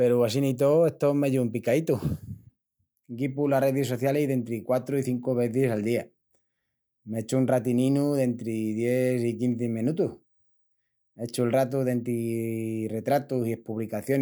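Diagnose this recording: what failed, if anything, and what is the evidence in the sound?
Nothing failed in this recording, and the speech gives no evidence of a fault at any stage.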